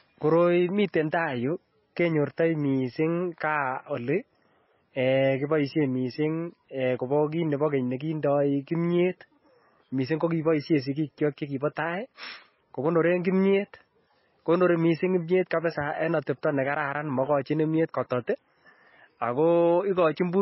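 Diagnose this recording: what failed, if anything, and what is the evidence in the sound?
MP3 compression throughout the speech, at the codec stage: nothing is heard above 5.6 kHz, and heavy damage leaves sibilants watery and onsets smeared. The likely cause is an encoder starved of bits, fitting about 18 kbps, cutting the treble and zeroing weak lines frame by frame.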